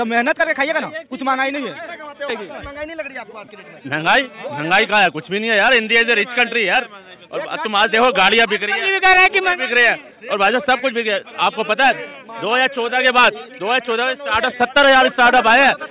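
Nothing technically wrong can be heard anywhere in the audio. No dropouts, distortion, timing glitches or level problems turn up at any point.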